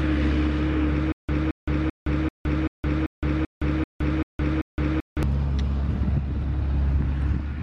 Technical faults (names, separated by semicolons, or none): stutter with silent gaps